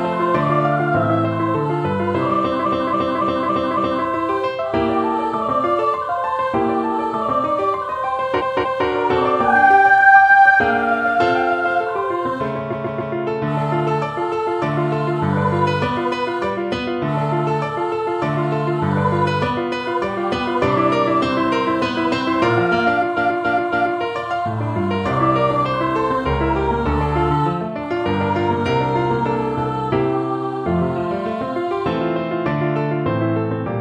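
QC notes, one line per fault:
2.60–4.00 s, 8.36–8.83 s, 12.68–13.10 s, 23.13–23.97 s, repeated frames: a block of compressed frames was delivered again, so 0.28, 0.23, 0.14 and 0.28 s of sound replays 5, 2, 3 and 3 extra times. This is heard as a stutter that lengthens the audio by 3.1 s overall.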